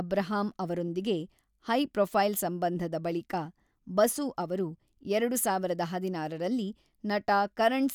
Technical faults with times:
none

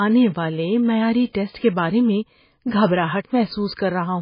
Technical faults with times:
0.00-4.22 MP3 compression
3.72 dropped samples

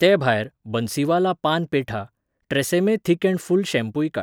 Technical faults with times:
0.44-4.21 word clock ticks

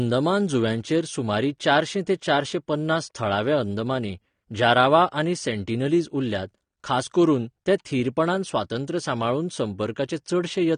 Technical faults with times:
0.00-10.77 AAC compression

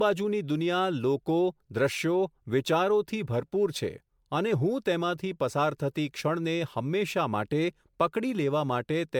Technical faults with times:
0.00-9.20 generation loss

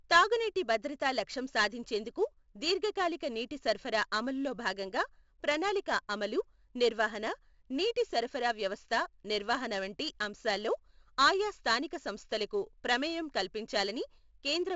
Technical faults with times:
0.00-14.76 4-bit ADPCM compression

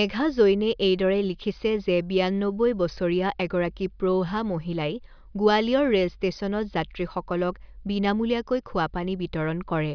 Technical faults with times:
none

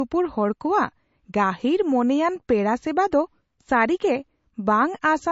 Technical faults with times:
0.00-5.32 low-bitrate audio saved at a high bitrate

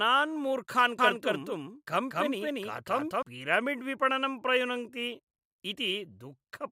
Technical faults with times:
0.99-3.23 doubled audio track

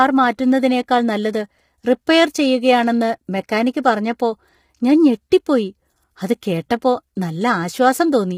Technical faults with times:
0.00-8.37 low-delay AAC compression

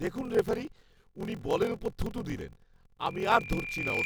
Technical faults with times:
0.00-4.05 block size mismatch (padded)
3.07-4.05 loudspeaker feedback squeal

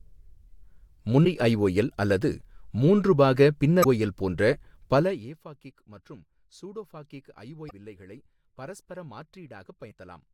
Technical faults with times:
3.81-3.86 damaged data in a compressed stream
4.91-5.37 zipper noise
7.67-7.72 damaged data in a compressed stream
9.88-9.93 damaged data in a compressed stream

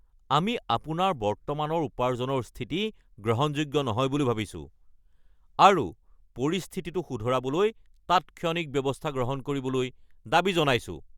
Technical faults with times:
none

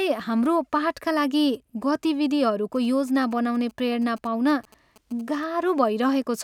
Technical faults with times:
2.75-5.44 GSM signalling bursts

